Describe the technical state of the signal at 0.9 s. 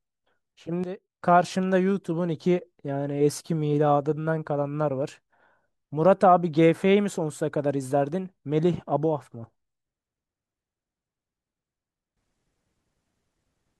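At 0.9 s you're inside a sudden gain jump running from about 0.84 to 1.21 s. The level drops by about 12 dB from one sample to the next, speech and background noise together, likely a gain setting applied with no ramp, then snaps back.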